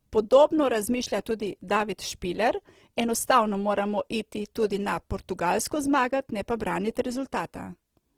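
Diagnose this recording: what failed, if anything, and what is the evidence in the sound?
The codec stage is where it went wrong, and it runs the whole way through the speech. Everything sounds grainy and rough, with a noisy fizz on voiced sounds, yet the top end stays open and nothing sounds muffled or swirly. That fits Opus compression in its music mode at a low rate, around 16 kbps. Short of bits, the encoder is likely refilling bands with folded or noise-like content, so the roughness is plain.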